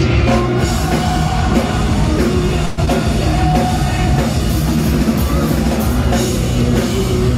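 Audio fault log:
2.65–2.79 s, call audio freeze: the last sound is stretched into a fading buzz or hiss for about 120 ms, likely from a jitter-buffer underrun. A spectrogram shows smeared, repeating bands and no silence.
2.85–2.89 s, skip ahead: roughly 70 ms of audio is dropped and the two sides are joined through a 15 ms bridge. The waveform shows an abrupt splice where playback catches up.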